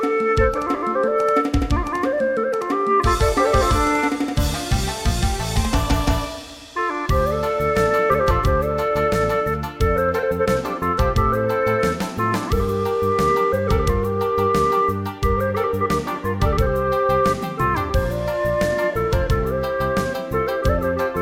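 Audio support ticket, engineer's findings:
No faults found on playback.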